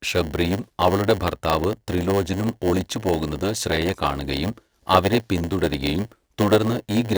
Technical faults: block size mismatch (padded)

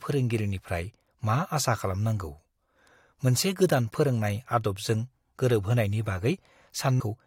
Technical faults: damaged data in a compressed stream

